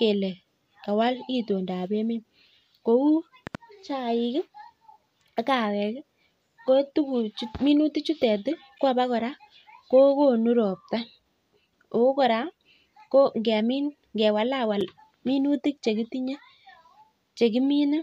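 At 3.47 to 3.57 s, a loud pop arrives as two sharp thumps roughly 10 dB above the speech, which continues underneath, likely from a voltage pulse such as a switch or static discharge. At 8.78 s, just before "ko abokora", and at 14.81 s, before "minutik chekitinye", a gap between stream segments inserts hard-edged silences of 11.3 ms and 4.7 ms where mismatched timestamps meet at 6-second segment boundaries.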